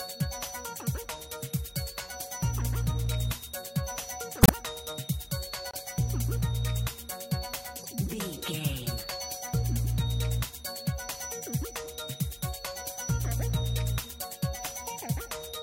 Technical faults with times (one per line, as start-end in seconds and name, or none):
4.36-4.50 corrupt frame decoded
5.70-5.80 corrupt frame decoded
7.78-7.86 corrupt frame decoded
8.97-9.03 corrupt frame decoded